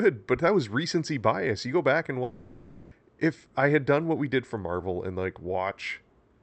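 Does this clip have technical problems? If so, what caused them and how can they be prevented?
Yes. After "go back and", 2.23 to 2.93 s, a long network dropout leaves a fading buzz over the lost 0.7 s, likely from packets that never arrived. A steadier network link would help prevent this.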